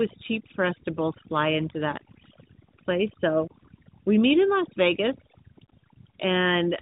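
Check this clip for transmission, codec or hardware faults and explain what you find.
Two faults run through the whole clip, both present from start to finish.

Overdone noise removal: the noise reducer was set far too hard, so it drops individual frequency bands whenever they sit close to its noise estimate. That takes the quieter edges of the speech along with the noise, leaving a lowered background that breaks up into little twinkly specks.

Tandem speech coding: the speech sounds like it was decoded and re-encoded as it crossed links using different codecs. The harshness points to CVSD on one leg, G.711 mu-law in the middle, and AMR-NB at 12.2 kbit/s at the end, with each coder working on the previous one's damage. The result is rougher, more muffled and more warbly than any single link, and nothing comes through above 3.8 kHz.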